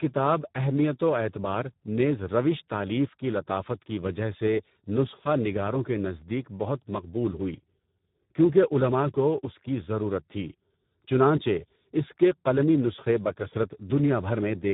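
From start to finish the speech carries heavy Speex codec damage. Speex is a CELP coder, and here it has too few bits for the excitation signal, which fits a low-quality setting around 8 kbps. The result is speech that sounds hoarse and noisy. The band is also narrow, with nothing above 3.8 kHz, giving a dull, telephone-like tone throughout.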